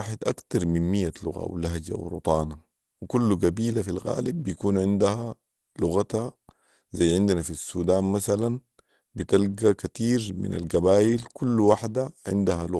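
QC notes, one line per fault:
11.05–11.27 s, lost packet rebuilt from error correction: right after "مثلا بتلقي كتير من", about 120 ms of the sound turns rougher and noisier with no gap or dropout. This fits roughly six separate 20 ms packets lost on the Opus call path, each replaced by the low-bitrate redundant copy carried in the following packet. The decoder plays those coarser copies, so continuity holds but detail drops for that stretch before normal frames resume.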